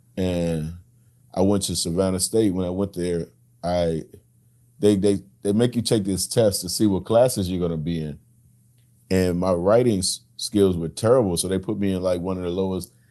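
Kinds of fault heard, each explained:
Nothing here counts as a fault: the speech comes over an ordinary call link, which is plain from the top end stopping at about 12 kHz, and there's nothing else to flag.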